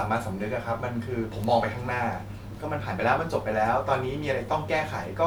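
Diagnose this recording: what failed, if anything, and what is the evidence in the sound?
An electrical switching spike at 1.44 s: a single sharp snap lands on top of the speech, peaking at roughly -15 dBFS. The fault sits in the analogue wiring stage. The likely cause is a nearby switch, motor or static discharge throwing a brief arc whose burst of energy couples into the audio line and is recorded as an impulse alongside the speech.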